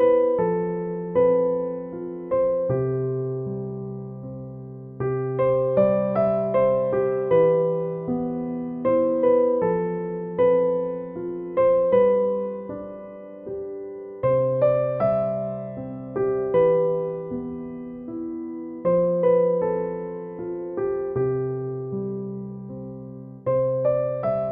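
No dropouts, clipping, glitches or other transport or processing faults can be heard anywhere in the recording.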